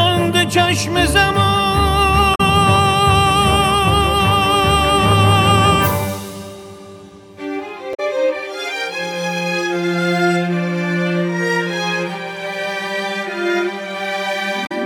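A short glitch breaks into the sound three times, at 2.32 to 2.41 s, 7.91 to 8.00 s and 14.63 to 14.72 s, each lasting about 90 ms. These are damaged data in a compressed stream: bytes in the encoded file were lost or overwritten, so the decoder misread those frames, lost its place in the bitstream and had to hunt for the next valid frame header before normal playback could resume.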